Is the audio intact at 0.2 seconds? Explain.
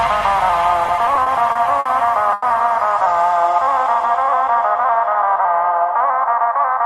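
Yes, at 0.2 seconds the audio is intact, with no dropout, click, distortion or other fault to be heard there.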